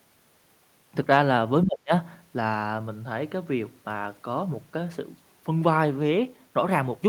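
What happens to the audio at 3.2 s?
Nothing goes wrong at 3.2 s: the speech continues intact there, with no dropout, click, distortion or other fault.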